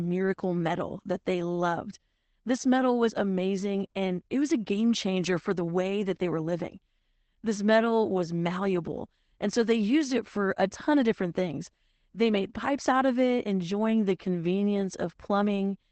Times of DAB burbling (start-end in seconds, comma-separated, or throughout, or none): none